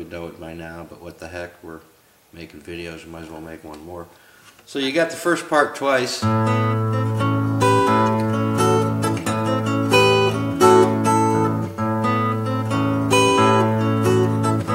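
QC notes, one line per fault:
No faults heard anywhere in this clip.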